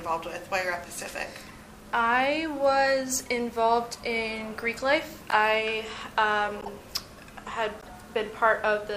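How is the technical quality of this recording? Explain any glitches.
Four short glitches mar the recording, all corrupt frames that were decoded anyway: 1.47 to 1.51 s, 5.30 to 5.35 s, 6.60 to 6.68 s and 7.80 to 7.89 s. Damaged bits made the decoder misread gains and codes, so energy lands at wrong frequencies for two to four frames each time. Each is a brief chirp or noise blip, loudest at 5.30 s (about −10 dBFS) and faintest at 1.47 s (about −35 dBFS). A spectrogram shows sharp-edged blocks of misplaced energy, and the waveform shows short bursts.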